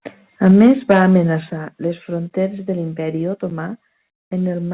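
A speech recording passed through a call path whose band stops at 4 kHz, consistent with G.711 narrowband coding. From 0.46 to 1.03 s the input is likely driven about 5 dB past the converter's ceiling, a microphone overload that flattens the peaks on a few percent of samples and gives the loudest syllables a harsh, crackling edge. The call software then likely cut the microphone gain in two microphone volume steps down, at 0.51 s by about 4 dB and at 1.5 s by about 7 dB, just before "les fronteres de", so voice and background drop abruptly in level each time.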